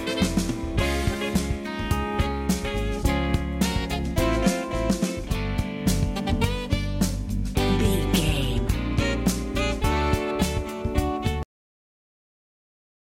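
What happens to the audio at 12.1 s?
At 12.1 s there is only digital silence, part of a cut-off end that runs from 11.43 s to the close. The final buffers were never written, so the sound halts mid-event with no decay. Unlike a dropout, it never resumes.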